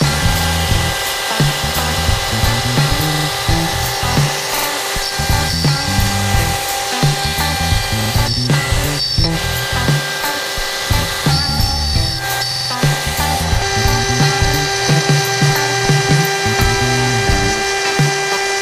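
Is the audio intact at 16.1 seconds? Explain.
Yes, the audio is intact at 16.1 seconds, with no dropout, click, distortion or other fault at that moment.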